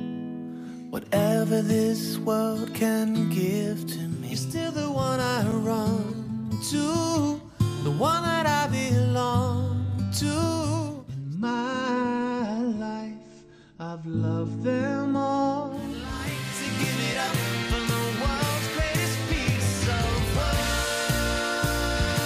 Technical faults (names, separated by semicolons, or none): block of digital silence